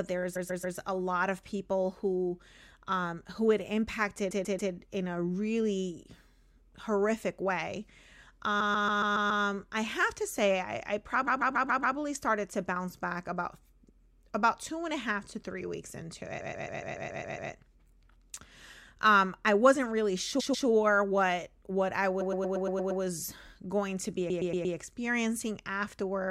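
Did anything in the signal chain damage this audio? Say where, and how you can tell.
Yes. Repeated frames damage the speech at 0.35–0.77, 4.30–4.72, 8.59–9.43, 11.26–11.96, 16.40–17.51, 20.39–20.67, 22.20–23.01 and 24.29–24.75 s. At each spot a short block of about 139 ms (116 ms in the last two) loops two to eight times. This points to the codec or storage stage: a run of compressed frames was written more than once and decoded again, adding roughly 5 seconds overall.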